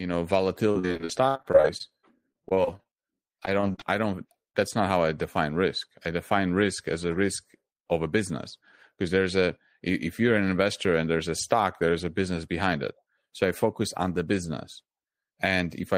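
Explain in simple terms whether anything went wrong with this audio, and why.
From 0.71 to 3.83 s there is repeated packet loss (robotic sound): dozens of short dropouts, up to 66 ms each, were patched by stretching the previous sound, making the speech choppy.

Between 4.29 and 4.34 s, short concealed packet loss leaves a brief smear where about 20 ms of audio failed to arrive and was filled in.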